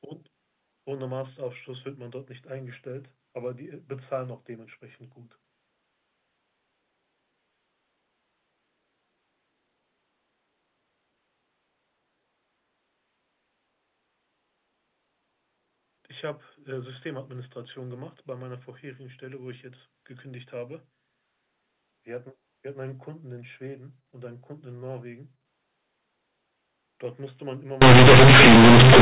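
At 27.82 s the decoder stops expanding the A-law bytes and starts playing them as plain linear 8-bit samples, which is companded audio read as linear, and this continues to the end at 29.01 s. Because the logarithmic codes are taken at face value, every sign change jumps across about half the output range and quiet passages come out as loud as peaks. The speech, carried until then over ordinary 8 kHz G.711 telephone coding, turns into harsh, very loud buzzing distortion with heavy noise filling the pauses.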